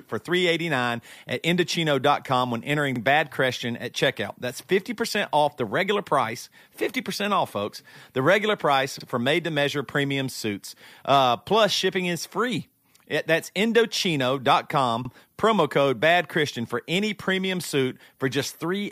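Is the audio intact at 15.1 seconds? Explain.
No. There's an overlapping chunks glitch right there, running from about 15.05 to 15.10 s. The speech looks like it was handled in 6-second chunks, and at this join the next chunk starts a bit before the previous one finished, so roughly 48 ms of audio gets played twice. To the ear it comes across as a quick stutter or click, a tiny skip-back in the speech right at that boundary.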